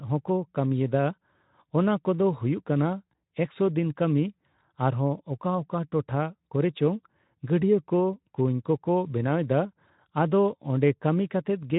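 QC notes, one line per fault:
No faults are present in the signal, which carries the speech through a Speex codec path that is working as intended.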